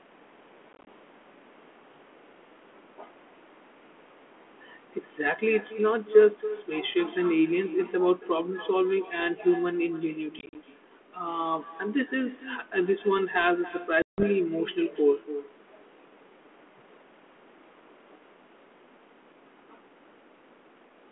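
From start to finish there's an echo with no canceller on this speech. The far end is evidently playing the call over a loudspeaker, and its microphone feeds it straight back, so every phrase returns around a third of a second later as a quieter, thinner copy, about 16 dB down. The echo rides on a narrow telephone band with light codec roughness, which fits 32 kbit/s G.726.

Then there's packet loss on an ADPCM call, in three places. From 0.73 to 0.88 s, about 80 ms of audio drops out as short scattered holes across 140 ms, none longer than 20 ms. From 10.39 to 10.56 s it's similar: 90 ms gone across 160 ms, the longest gap 40 ms. At 14.02 to 14.24 s, 160 ms cuts out. Each hole is hard-edged silence, and because the decoder's predictor and step size have lost sync with the sender's, the speech comes back slightly distorted.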